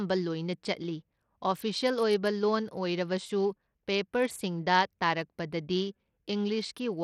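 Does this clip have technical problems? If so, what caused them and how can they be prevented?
Yes. Bluetooth SBC compression, throughout: the speech has a dull, unsteady top end that flickers in and out, with gritty noise riding on it. This is likely a small bit pool starving the upper sub-bands, which fits a bitrate near 80 kbps. Record over a wired connection, or raise the SBC bit pool or use a better Bluetooth codec.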